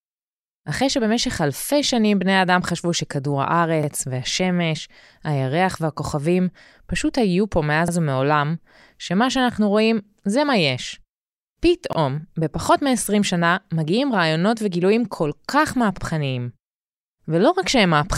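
Speech with overlapping chunks: each 4-second block restarts about 48 ms early. That slice repeats, giving stutters at 3.83, 7.88, 11.93 and 15.98 s.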